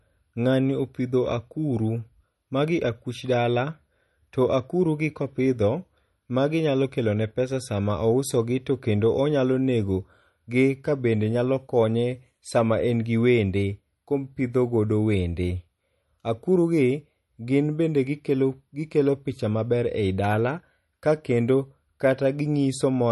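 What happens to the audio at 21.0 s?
At 21.0 s you're hearing the same MP3 compression as the whole clip: nothing above 11.6 kHz, watery swirl on the speech, likely from a starved bitrate around 40 kbps.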